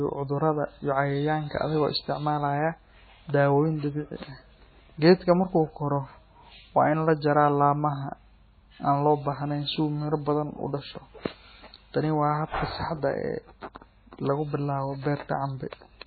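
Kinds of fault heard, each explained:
MP3 compression: The speech throughout has a hard ceiling at 4.5 kHz, heavy watery, swirling smearing, and metallic chirps on s sounds, which likely comes from MP3 encoding starved of bits, at a level that fits a bitrate near 16 kbps. The encoder drops the treble and switches weak frequency lines on and off from frame to frame. A spectrogram shows an empty band above 4.5 kHz and flickering, patchy energy below it.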